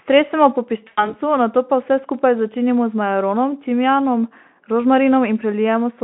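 From 0.87 s to 1.17 s the speech smears into a fading buzzy tone or coloured noise before recovering weakly: VoIP packet loss concealed by the speech codec. About 100 ms of audio went missing, which fits five 20 ms frames, and the Speex decoder extrapolated from its last pitch and filter while lowering the gain.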